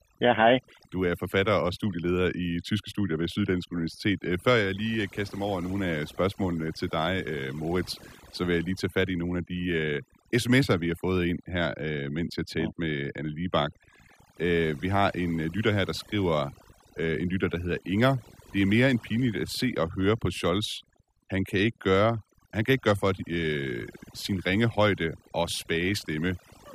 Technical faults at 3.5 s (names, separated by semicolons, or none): overdone noise removal